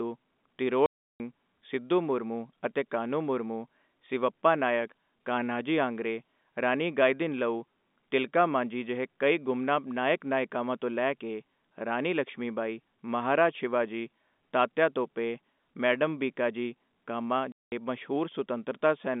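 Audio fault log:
0.86 to 1.2 s and 17.52 to 17.72 s, packet loss filled with silence: the speech drops out completely for 340 ms just before "ਸਿਧੂ ਮੁਰਮੁ ਅਤੇ" and for 200 ms right after "ਟੋਪੇ ਮੈਡਮ ਭੀਕਾਜੀ ਕਾਮਾ". Both gaps are whole multiples of 20 ms, which fits 20 ms packets that never arrived and were replaced by silence. On the waveform these appear as flat lines with abrupt vertical cut edges. On the spectrogram they are blank vertical bands across the narrow telephone band, which carries only 200 Hz to 3.6 kHz.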